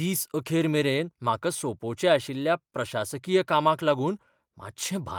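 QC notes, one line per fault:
No faults found.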